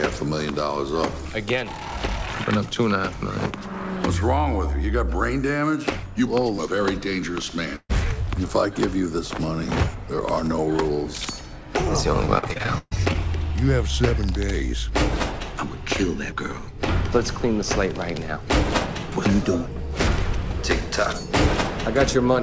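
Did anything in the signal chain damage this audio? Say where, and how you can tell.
Yes. At the network stage there is a burst of packet loss from 7.76 to 7.91 s. The receiver extends the last sound for roughly 130 ms and fades it, ending in about 50 ms of silence. The audio then resumes with around 140 ms missing.

Between 12.25 and 13.16 s there is repeated packet loss (robotic sound): nine separate gaps, the longest 131 ms, with about a third of that stretch concealed. Each patch carries the last sound forward, giving choppy playback with pieces gone. This passes through the WebRTC call path, where nothing above 8 kHz survives, consistent with G.722.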